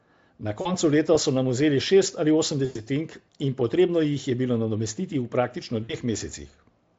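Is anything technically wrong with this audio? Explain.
Yes. VoIP packet loss concealed by the speech codec occurs at 0.61–0.73 s, 2.65–2.81 s and 5.83–5.94 s, covering about 40, 100 and 60 ms of missing audio. The decoder guesses each gap by repeating its last pitch and spectral shape at falling gain, so speech smears into a fading buzzy tone or coloured noise that stays weak briefly after the stream resumes. The Speex coding itself sounds clean.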